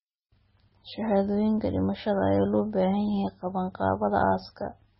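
From start to finish the speech is band-limited, with nothing above 5.6 kHz, and carries a watery, swirling texture with chirpy sibilants and softened consonant attacks. The pattern is that of heavy MP3 compression, likely at a very low bitrate in the region of 17 kbps. Starved of bits, the encoder discards the treble at a fixed cut-off and drops weak frequency lines that flicker in and out between frames.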